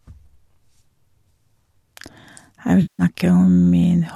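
AAC frame loss with concealment, 2.82 to 3.03 s: 170 ms of frames go missing and are refilled from the last good spectrum, leaving a smeared, noisy patch.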